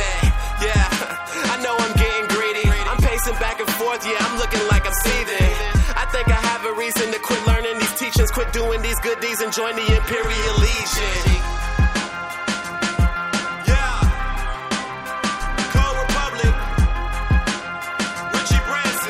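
Nothing stood out as a technical problem on listening to this audio.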